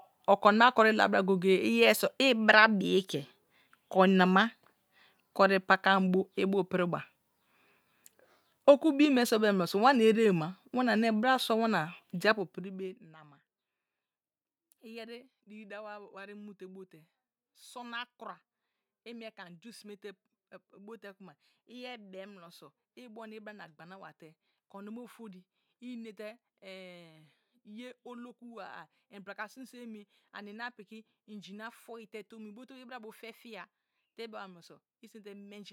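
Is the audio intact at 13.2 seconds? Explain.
No. Zipper noise runs from 12.31 to 13.21 s, just after "sua wana de." The level falls by about 20 dB in unsmoothed 1 dB steps, around fifty per second. Each step clicks, so a fast ticking zips over the speech as it fades.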